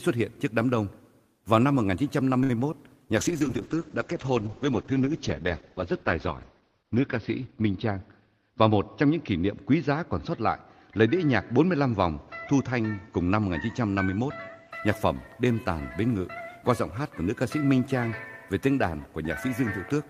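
At 2.43 to 2.51 s comes a short stall from a late packet. The jitter buffer ran dry, so the last sound is held for about 59 ms. It shows as a frozen, flat band on the spectrogram before the audio resumes where it stopped.

At 2.71 to 2.74 s, a short concealed packet loss drops about 20 ms of audio. A brief extrapolated patch covers part of the gap, heard as a tiny smear. It appears as a small discontinuity in the waveform.

From 3.18 to 14.77 s a call bitrate drop takes the stream from 32 to 8 kbps and stays at the lowest rate for about 3.7 s. Bandwidth falls from 20 kHz to 6 kHz, giving a muffled, watery sound. The spectrogram shows a hard ceiling with nothing above 6 kHz.

Inside that stretch, from 7.90 to 8.43 s, a jitter buffer speed-up plays the audio at 110% speed, removing about 50 ms as pitch periods are spliced out. Pitch holds while the sound feels hurried. The waveform shows cycles of normal length, with some cut out at the splices.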